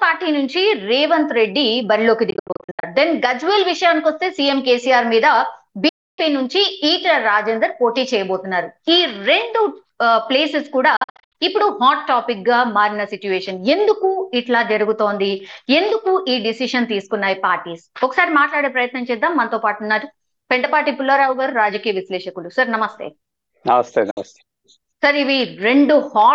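Bluetooth dropouts at 2.30–2.84, 5.89–6.19, 10.96–11.35 and 24.11–24.17 s, likely from late packets, cut the sound to silence; these appear as sharp-edged blank gaps, the first and third broken into short holes.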